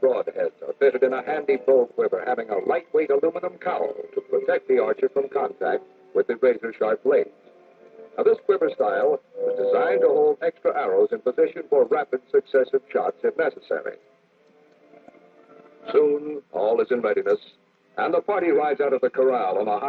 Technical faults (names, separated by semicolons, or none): none